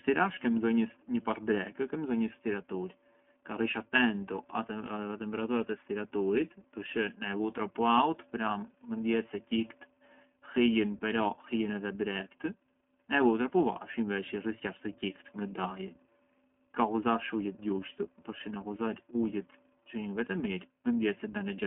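Throughout the speech, the iLBC codec confines the sound to a telephone band with nothing above about 3.7 kHz, and it adds a rough, synthetic grain. Unlike a simple low-pass filter, the speech is rebuilt in independent 20 ms frames, which fits iLBC's 15.2 kbps mode.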